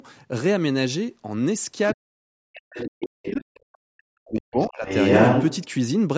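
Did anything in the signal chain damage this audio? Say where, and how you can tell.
Yes. The speech is suppressed in double talk at 1.94–3.44 s and 3.8–4.87 s, likely by call-processing echo suppression. Both sides talking at once makes the waveform collapse by about 40 dB.

The other side's voice leaks through at 1.86–1.95, 2.75–2.88, 3.24–3.36, 3.73–3.78, 4.62–4.69 and 4.87–5.67 s. These are foreign harmonic traces on the spectrogram, reaching about 5 dB above the speech at the end, likely from incomplete echo cancellation.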